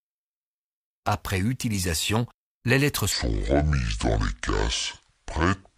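Right after "utilisation les lettres", at 3.12 s, the speech drops into a section at the wrong speed, running at 0.616 times normal until the end. Pitch falls about ten semitones with it, so everything turns deep and draggy, likely from playback against the wrong clock.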